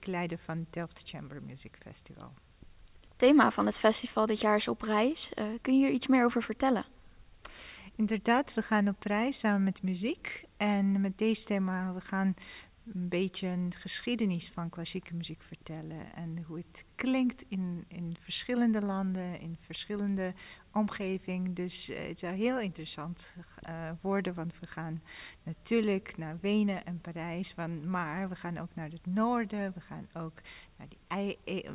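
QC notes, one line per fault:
No faults found in this audio. Nothing in it calls for a timed entry.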